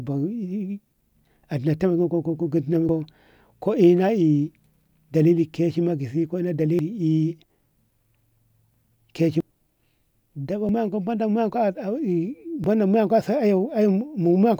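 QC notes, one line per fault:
2.89, 6.79, 8.74, 10.69 and 12.64 s, audio missing between chunks: brief skips where the speech jumps forward with no gap, each dropping about a twentieth of a second. The roughly two-second spacing likely reflects a recorder losing audio at each chunk handover.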